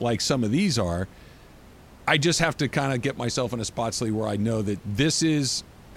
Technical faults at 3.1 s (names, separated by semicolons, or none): none